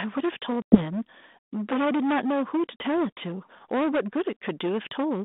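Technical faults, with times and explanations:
Throughout, hard clipping: a harsh fuzz sits on every loud syllable. The speech is driven about 16 dB past what the chain can pass, so roughly a fifth of the samples are cut flat, and those flat tops add harmonics far up the spectrum.
0.62 to 0.78 s and 2.80 to 2.82 s, packet loss on an ADPCM call: two hard-edged silent holes, the first longer. Speech comes back with brief grit, because the 32 kbit/s G.726 decoder's predictor and step size drifted from the sender's before resettling.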